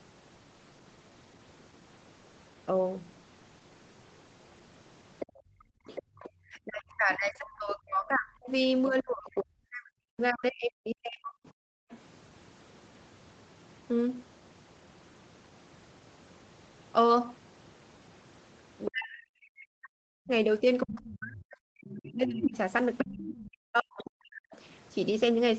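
A speech recording from a call. From 5.19 to 11.97 s and again from 18.85 to 24.57 s a second voice can be heard, likely the other side's voice leaking through from the loudspeaker. It sits well below the talker the first time and nearly as loud the second, showing as an extra set of harmonic traces on the spectrogram. Background gated by the echo canceller drops the room sound by about 25 dB at 5.26 to 5.74 s and by about 40 dB at 11.71 to 11.9 s, leaving brief notches of near-silence in the waveform's noise floor. Speech suppressed in double talk likely makes the talker dip very deeply from 6.02 to 11.43 s and 18.87 to 24.5 s. On the waveform these appear as collapsing envelopes wherever the two voices overlap. Throughout, the call path's codec leaves nothing above 8 kHz, a flat ceiling across the spectrogram.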